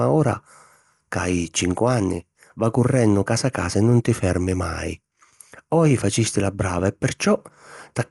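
From the first second to the end, the speech carries plainly audible codec damage that's most likely Dolby Digital compression at a low bitrate, something like 64 kbps. Nothing comes through above 11.5 kHz, so the top end sounds dull and closed in. The encoder starves many frequency lines of detail and the decoder fills them with noise, which gives a rough, fluttering grain around the tonal parts of the speech.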